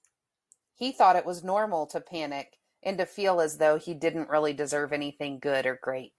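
No technical faults can be heard in this speech recording.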